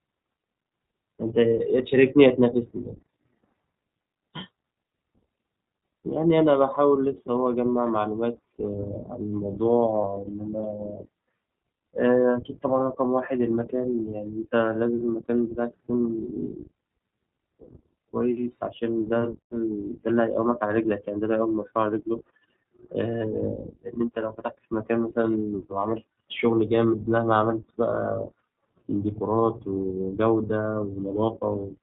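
The speech runs through the iLBC codec throughout, coding each 20 ms frame independently at a rate consistent with its 15.2 kbps mode. The narrowband coding removes everything above 4 kHz, and the codec damage is plainly audible as a dull, slightly rough, synthetic edge on the speech.

Lost iLBC frames occur from 10.02 to 10.05 s, a gap that fits a single missing 20 ms frame. The decoder fills it by repeating the last pitch cycle mixed with noise, heard as a brief buzzy, held vowel before the speech snaps straight back.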